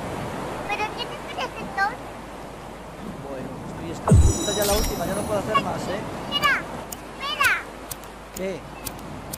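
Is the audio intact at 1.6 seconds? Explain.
Yes, at 1.6 seconds the audio runs on without any dropout, click, distortion or other audible fault.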